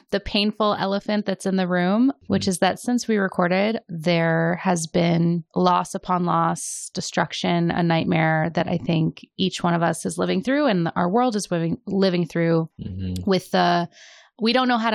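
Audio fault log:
No technical faults can be heard in this speech recording, and the signal holds a steady, intact state across its whole span.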